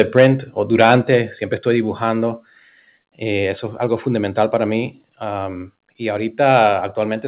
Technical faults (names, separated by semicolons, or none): microphone overload; microphone volume stepped down